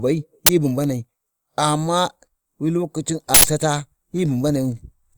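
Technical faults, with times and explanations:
0.46–0.49 s and 3.34–3.44 s, uninitialised buffer: loud digital noise bursts of 23 and 93 ms, where unwritten memory played as audio, fitting 1024- and 4096-sample buffers.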